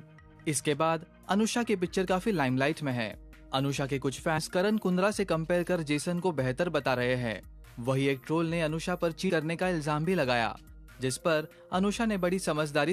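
At 4.37 s and again at 9.29 s the decoder skipped compressed frames: a short run of frames, consistent with a frame length of about 23 ms, was either missing from the stream or refused as damaged, so roughly a tenth of a second of audio never plays. Each time, the sound jumps forward abruptly.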